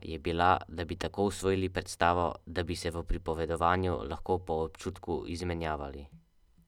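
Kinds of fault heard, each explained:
Nothing wrong turns up anywhere in this bit of speech; it's a fault-free listen all the way through.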